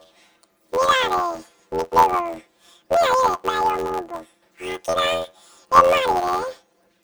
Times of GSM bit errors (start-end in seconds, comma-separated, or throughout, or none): none